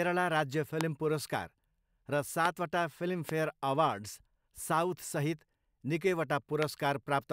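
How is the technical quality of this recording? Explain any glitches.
The recording is marred by four loud pops over the speech, at 0.81–0.83 s, 2.45–2.48 s, 3.29–3.31 s and 6.63–6.65 s. Each is a single sharp thump lasting about 20 ms and peaking roughly 20 dB above the speech, the third a little softer. The likely cause is a voltage pulse from a plug, switch, static or driver glitch, shaped by the downstream circuitry. Unlike a dropout click, the speech carries on unbroken beneath each pop.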